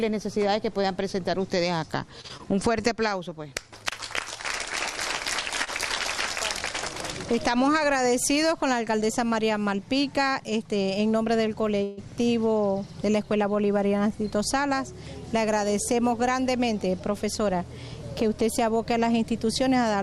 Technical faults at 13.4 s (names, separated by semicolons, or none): none